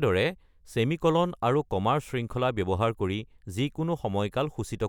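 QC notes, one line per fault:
No faults found in this speech recording.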